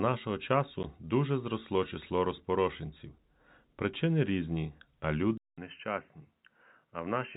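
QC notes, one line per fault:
0.83 s: packet loss filled with silence. A single dropout of about 10 ms, which fits one lost packet, leaves a hole in the speech with hard edges, because the receiver inserted digital silence instead of concealing the gap.
5.38 s to end: input likely switched to a poorer device. After a gap of about 200 ms the sound turns duller and drops about 5 dB, with nothing above 3.1 kHz and a new noise floor roughly 50 dB below the speech, consistent with a narrower-band microphone.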